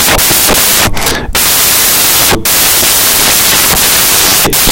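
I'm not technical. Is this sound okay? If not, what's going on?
No. Samples built from the wrong bytes, throughout the whole clip from the first second to the last. Each sample is stored as a few bytes, and here the playback reads them in the wrong order or misaligned by one. The tiny, fast-changing parts of each value end up treated as the big parts, so the real sound is buried under loud hiss.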